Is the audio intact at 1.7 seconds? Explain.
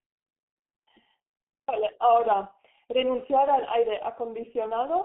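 No, not really. At 1.7 seconds you're hearing the G.723.1 codec at work, same as across the whole clip. It squeezes speech into a slow frame-by-frame voice model at a very low rate, which fits about 6 kbit/s, and only passes roughly 150 Hz to 3.4 kHz. The damage is heavy: the speech comes out muffled and hoarse, with consonants smeared because the model can't track fast changes.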